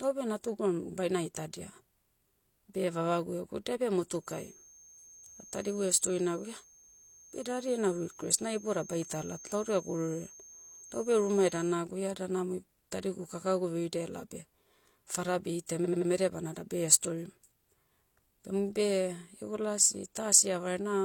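From 4.16 to 11.79 s a feedback whistle sits under the speech: a thin 6.4 kHz tone about 20 dB down, likely from a speaker-to-microphone loop held just short of runaway. At 15.81 to 16.06 s repeated frames make the speech stutter as an 85.3 ms block plays three extra times, adding 256 ms.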